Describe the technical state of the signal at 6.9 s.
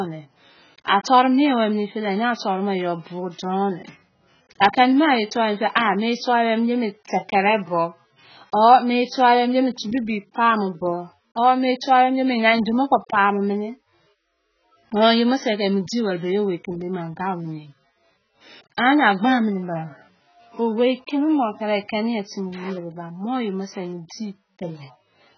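At 6.9 s the speech likely passed through heavy AAC compression, which fits a rate near 12 kbps, running throughout the clip: coarse quantisation removes everything above 6.8 kHz, leaving dull, smeared, warbling sibilants.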